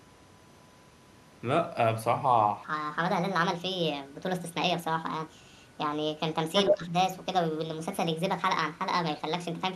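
A steady 1 kHz whine sits under the speech for the whole recording, about 35 dB below it. It is USB whine. The bus polls in 1 ms frames, and that current leaks into the audio through the power or ground. The result is a fixed tone at exactly 1 kHz, its strongest component. It stays put while the speech moves around it. From 2.64 s to the end, the speech plays back too fast. It runs at 1.48 times its proper speed, so pitch rises by about seven semitones along with the tempo. Voices sound high and rushed. Speed and pitch shift together, at one moment, and stay shifted. That points to a section at the wrong speed. The likely cause is an editor or player conforming this part to the wrong clock rate. Between 6.69 and 6.93 s the speech dips sharply, by around 10 dB at its deepest. About a fifth of a second is affected. The level then returns. This is speech suppressed in double talk. Both ends were likely talking at once. 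The echo canceller could not tell its own talker from the returning echo, so it pulled the level down.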